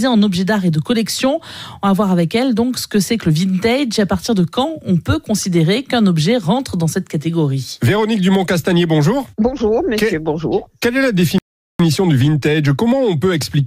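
At 11.38 s the player likely ran out of buffered data or had its output thread held up, and nothing reached the output until it recovered at 11.80 s. The result is a playback stall: the audio cuts off mid-flow and leaves about 0.41 s of dead silence before it resumes. The abrupt stop and restart make the gap stand out clearly against the continuous sound around it.

From 11.80 s to the end of the clip the player works off the backlog the stall created. It trims short slices out of the stream and cross-fades over each join, which gives time-compressed catch-up at 1.1 times normal speed. Because the slices are dropped instead of resampled, the pitch stays where it was while the pace runs hurried.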